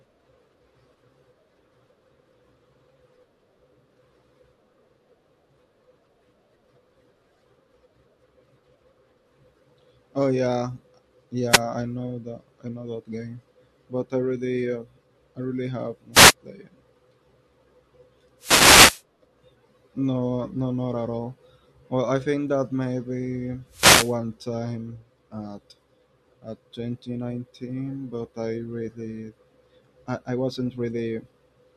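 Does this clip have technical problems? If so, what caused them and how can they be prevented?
Yes. A wireless microphone noise hit occurs at 11.49–11.61 s, just before "I know that I", at 16.13–16.34 s, right after "uh I really have", then at 18.39–19.03 s and 23.70–24.16 s. Each time the FM radio link fades as reflected signals cancel, so receiver noise surges into a brief swish of static over the speech. Prevent it with diversity receivers, well-placed antennas with clear line of sight, and a shorter transmitter-to-receiver distance.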